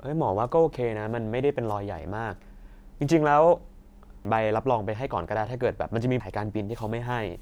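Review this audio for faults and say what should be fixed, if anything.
Damaged data in a compressed stream at 4.25 s and 6.20 s. Corrupt frames break decoder sync, causing a brief chirp, squawk, click or short hole. Verify file or stream integrity before decoding.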